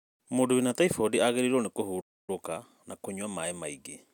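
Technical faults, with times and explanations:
2.00–2.30 s, playback stall: the speech cuts out mid-flow into about 272 ms of silence, then carries on. This is likely the player running short of buffered data or having its output thread blocked, leaving nothing to send until it recovered.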